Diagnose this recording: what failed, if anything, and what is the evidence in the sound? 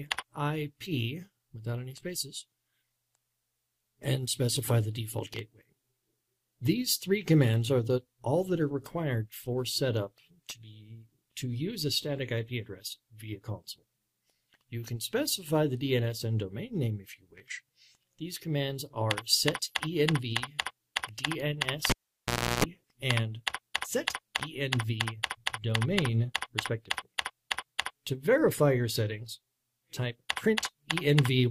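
A pop at 21.90 s, 0.69 s near-silence including 0.34 s of 60 Hz buzz, pop at 22.64 s: analogue wiring, live cable pulled and plugged in.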